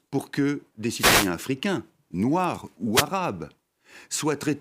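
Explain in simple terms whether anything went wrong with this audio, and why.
A wireless microphone noise hit occurs twice: from 0.96 to 1.30 s, between "pour que des" and "africains noirs", and again from 2.93 to 3.05 s, just after "africains noirs". The microphone's radio signal briefly faded, so the receiver's own static rose and swished over the speech.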